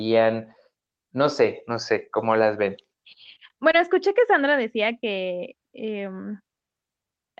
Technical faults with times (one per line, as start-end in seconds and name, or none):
3.71-3.75 short concealed packet loss